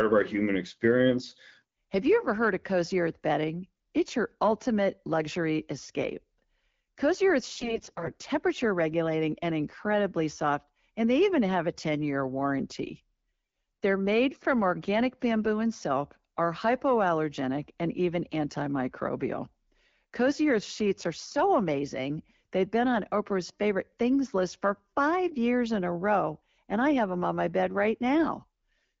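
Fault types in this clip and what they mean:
AMR bit errors: From about 7.53 to 8.16 s, right before "regulating and incredibly soft", the speech goes hoarse and gargly. It sounds like a weak radio link flipped a sizeable share of the less protected bits in each AMR frame, while the checks on the core bits still passed. The excitation pulses land in the wrong places and the fine pitch, gain and spectral values drift, so pitch and level roughly hold but the texture turns scratchy against the otherwise clean 12.65 kbit/s wideband coding.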